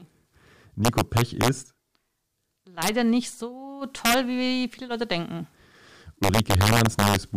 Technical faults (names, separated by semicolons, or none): integer overflow